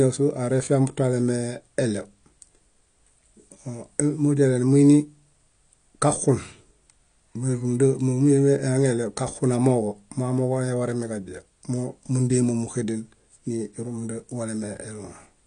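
Speech with plainly audible AAC compression throughout: nothing above 9.8 kHz, dull smeared sibilants, likely AAC-LC at a low bitrate, which fits roughly 32 kbps.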